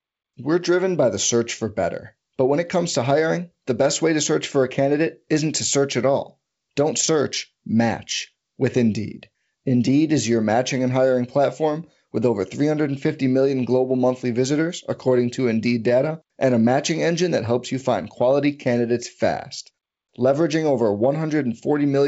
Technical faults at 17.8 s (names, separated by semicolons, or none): none